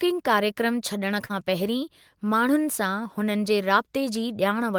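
At 1.25 to 1.31 s the speech shows short concealed packet loss: about 40 ms never arrived, and the receiver extended the preceding sound to cover it, giving a brief smeared wobble rather than the silent hole or hard click of an unconcealed dropout.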